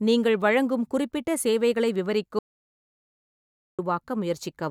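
At 2.39 s, just after "நீங்கள் வழங்கும் குறிப்பிட்ட சேவைகளை", the speech cuts out abruptly. An audio dropout to silence follows. It lasts about 1.4 s, until 3.79 s. The gap is dead digital silence, with no room tone. The input was likely lost while recording continued.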